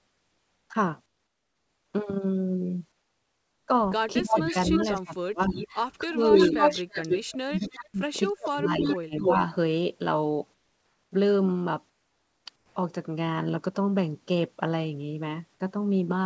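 From 0.00 to 0.70 s, 1.06 to 1.94 s and 2.92 to 3.68 s, the real background in the pauses gives way to comfort noise, a steady, featureless hiss about 6 to 8 dB quieter. This likely comes from discontinuous transmission, with the receiver synthesising the noise while no audio is sent.

From 4.21 to 7.85 s and again from 8.46 to 9.33 s there is an echo leak: a copy of the speech trails by about 0.3 s at roughly the same level. This is likely loudspeaker pickup that the echo canceller failed to remove.

Overlapping this, from 4.31 to 6.55 s and 7.04 to 9.31 s, speech is suppressed in double talk. The talker dips in pieces by roughly 25 dB, then 35 dB, likely from the canceller ducking everything during the overlap.

Comfort noise returns at 10.54 to 11.12 s, 11.90 to 12.46 s and 12.56 to 12.76 s, about 2 to 6 dB below the real background.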